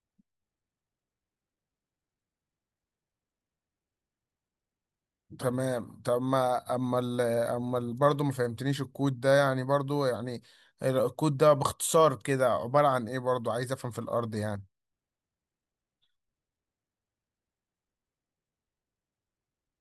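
Nothing stood out as a technical fault on listening to this speech recording.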